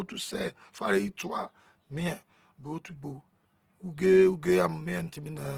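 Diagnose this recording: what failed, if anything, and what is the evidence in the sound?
The codec stage failed throughout. The speech sounds rough and grainy, with high-frequency detail replaced by noise, yet the content still reaches about 20.2 kHz. This is likely Opus compression in CELT mode near 16 kbps. It fills bands with noise instead of leaving MP3-style swirling holes.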